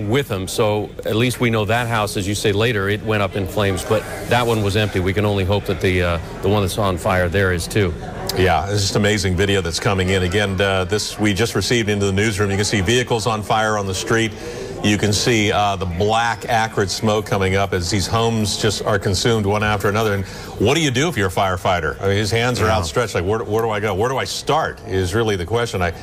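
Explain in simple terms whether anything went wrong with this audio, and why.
Hard clipping runs through the whole clip: the loudest peaks were too big for the recording to hold, so a small fraction got flattened, adding crackle.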